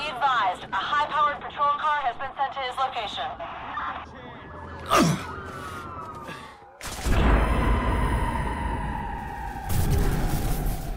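No technical faults can be heard anywhere in this clip.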